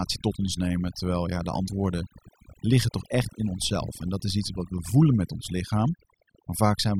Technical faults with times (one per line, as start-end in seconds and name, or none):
0.00-6.99 overdone noise removal